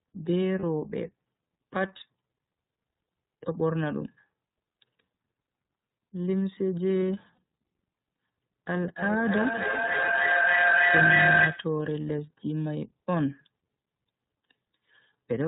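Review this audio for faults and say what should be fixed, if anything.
The whole recording carries the iLBC codec: nothing above 4 kHz and a slightly rough, synthetic texture, consistent with the 30 ms, roughly 13 kbps mode. To prevent it, negotiate a wideband codec such as Opus when both ends support it.

Lost iLBC frames at 0.59 s and 7.35 s leave brief 30 ms buzzy, held-vowel fills, which fits one dropped frame each, with recovery immediately after. To prevent them, reduce packet loss on the network path or enable redundancy or FEC.

Feedback echo between two devices runs from 8.95 s to 11.77 s. The audio comes back roughly every 0.3 s and builds up rather than decaying, peaking about 7 dB above the direct speech. To prevent it, mute the speaker or microphone of one of the two devices sharing the room, or leave the call on one of them.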